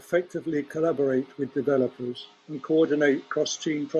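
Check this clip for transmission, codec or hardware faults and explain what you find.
An input switched to a poorer device from 2.18 s to the end, most likely a change to another microphone or a headset's call profile. With no gap at the switch, the speech turns dull and boxy, with nothing above 8 kHz. It also drops a few decibels and gains a faint new noise floor, roughly 40 dB down.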